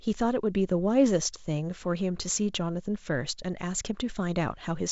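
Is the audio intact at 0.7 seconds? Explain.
Yes, the audio is intact at 0.7 s, with no fault at that moment.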